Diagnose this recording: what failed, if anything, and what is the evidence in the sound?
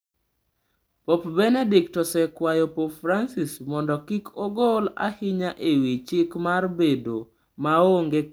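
Nothing failed; no audible fault appears in the recording.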